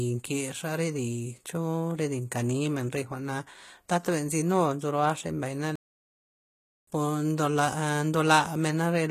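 Speech with plainly audible codec damage throughout: the sibilants sound gritty and metallic. This is likely HE-AAC compression, with band replication rebuilding the treble from copied lower bands, which fits a low bitrate around 20 kbps. On a spectrogram the upper band would look smeared and patchy, with harmonics misaligned above the crossover. A playback stall silences the audio from 5.76 to 6.87 s, about 1.12 s, before it resumes, likely from the player running out of data. A waveform would show a flat line across that gap, and a spectrogram a blank vertical band.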